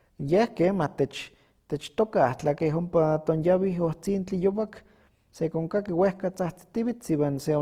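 A speech recording carries plainly audible Opus compression damage from start to finish, likely from encoding at a low rate around 24 kbps in the codec's music (CELT) mode. The band stays full, with content reaching about 20.2 kHz, yet the voice sounds grainy and rough, with a noisy texture over its tonal parts. Unlike MP3 damage, there is less swirling or watery holing, because the gaps are filled with folded or noise-like energy.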